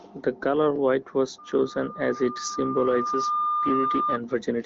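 A speech recording with a loudspeaker feedback squeal running from 1.38 s to 4.19 s: a single tone at 1.2 kHz swells over about two seconds until it sits roughly as loud as the speech. A microphone is hearing its own loudspeaker, and at that frequency the loop gain has passed one. Unlike a steady interfering whistle or test tone, it grows by itself from near silence at one fixed pitch. The band stops near 7.6 kHz, consistent with a wideband HD Voice link.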